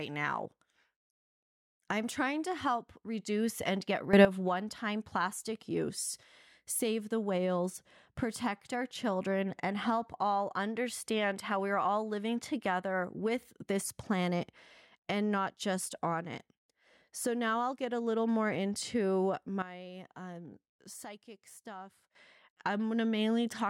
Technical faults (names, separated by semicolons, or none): sudden gain jump